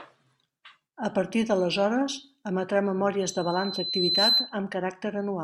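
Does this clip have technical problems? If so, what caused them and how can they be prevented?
Yes: loudspeaker feedback squeal from 3.21 to 4.55 s, a 4.1 kHz tone that swells over roughly a second until it sits a few decibels above the speech, because the microphone re-captures its own loudspeaker and loop gain exceeds unity there. Preventing it means lowering gain, moving the microphone away from or behind the loudspeaker, or notching 4.1 kHz.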